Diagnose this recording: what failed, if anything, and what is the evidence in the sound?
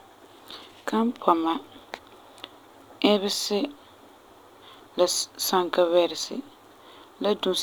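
An output buffer at the driver stage went unfilled, leaving a 5.3 ms block of digital silence at 0.51 s; a gap this short is heard as a tick or dip.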